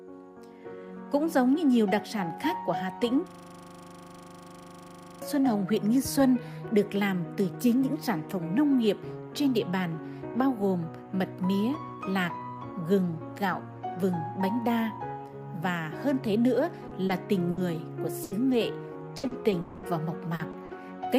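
From 3.30 to 5.22 s, a system hang loop repeats one 40 ms slice of audio dozens of times, producing a rigid 25 Hz buzz while the driver stalls.

From 16.87 to 20.71 s, repeated packet loss leaves twelve gaps, the longest 140 ms. The concealment stretches the preceding sound into each hole, giving choppy, robotic audio with pieces missing.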